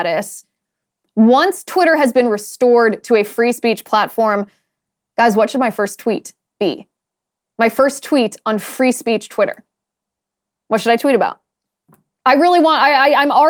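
No technical faults can be heard in the speech recording. No point in the audio calls for a timestamp or a note.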